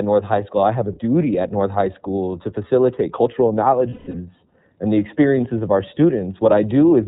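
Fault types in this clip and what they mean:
iLBC codec: a narrowband VoIP coder working here in 30 ms frames, which fits a rate near 13 kbps. The speech is cut off above 4 kHz and carries a plainly audible rough, slightly synthetic texture across the whole clip, as each frame's excitation is coded independently.
Lost iLBC frames: from 3.89 to 4.15 s, just after "to facilitate cultural", about 210 ms of audio is missing. The decoder fills the gap by repeating the last pitch cycle mixed with noise, giving a held, buzzy vowel for roughly a fifth of a second before clean decoding resumes.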